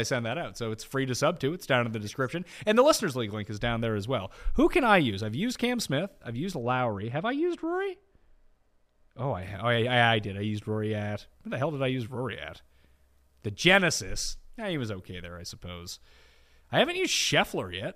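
From 6.62 s to 9.42 s, right after "I've used", the speech turns dull and muffled: de-emphasis applied wrongly. A treble-cutting filter meant to undo pre-emphasis has been applied where none existed or applied a second time, so the highs slope away smoothly, about 11 dB down at 10 kHz relative to 1 kHz. Sibilants lose their edge. On a spectrogram, energy in the upper frequencies fades visibly for that stretch; the waveform looks rounder, with fewer sharp peaks.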